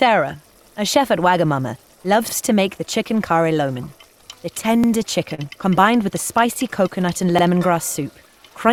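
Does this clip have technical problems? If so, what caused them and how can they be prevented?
Yes. Overlapping chunks occur at 2.29–2.34, 4.84–4.89 and 7.39–7.44 s. Every 2.5 s a new chunk starts 50 ms early, so that slice plays twice. It sounds like a stutter and shows as a repeated waveform segment and a vertical seam on a spectrogram. Prevent it by aligning chunk boundaries exactly, or by crossfading and trimming any overlap.

Short concealed packet loss occurs at 5.34–5.41 s. About 40 ms of audio went missing and was filled with extrapolated sound, which causes a brief smear. On a spectrogram it shows as a smoothed, blurred patch. Prevent it with a larger jitter buffer, forward error correction or a more reliable network path.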